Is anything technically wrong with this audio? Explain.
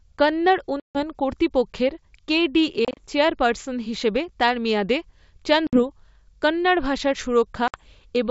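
Yes. There is packet loss on an ADPCM call, heard four times. At 0.80 to 1.01 s, about 150 ms drops to silence, which fits roughly fifteen lost packets. At 2.85 to 3.05 s, just before "চেয়ারপার্সন হিসাবে তার মেয়াদে", short gaps of up to 30 ms are scattered over 120 ms. At 5.67 to 5.80 s and at 7.68 to 7.80 s, just after "কন্নড় ভাষার", about 60 ms goes missing each time. Each hole is hard-edged. While the packets were missing, the decoder's predictor and step size drifted away from the sender's. So the speech comes back slightly distorted, then settles after a few tens of milliseconds. The G.722 wideband coding itself is heard clearly throughout.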